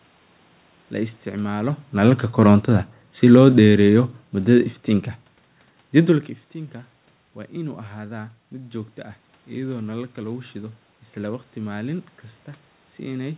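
Speech clip, and the main problem is automatic gain falling: from about 1.93 s to 5.16 s the level drifts down by about 6 dB. The gain control decided the input was too hot or its background noise too strong and eased its gain back over those three seconds, so the voice and the room noise behind it sink together. That shared drop is what gives it away, unlike the talker shifting position around 1.5 s and 6 s. Everything sits below 4 kHz, consistent with a G.711 mu-law call path.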